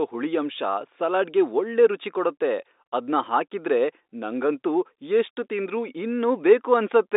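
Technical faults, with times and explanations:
No technical faults are present; the speech comes through a narrow telephone band of about 250 Hz to 3.7 kHz, with nothing above about 3.8 kHz.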